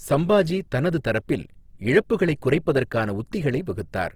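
Throughout, the speech sounds rough and grainy. This is likely Opus compression in music mode, which fits about 16 kbps, with starved bands filled by noise.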